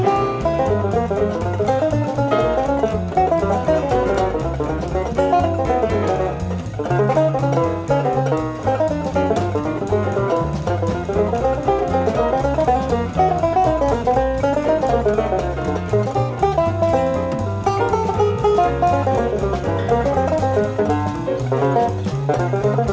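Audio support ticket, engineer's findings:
No fault found in the recording. The WebRTC call path is audible as a band limit, with nothing above 8 kHz, which fits a wideband G.722 call codec.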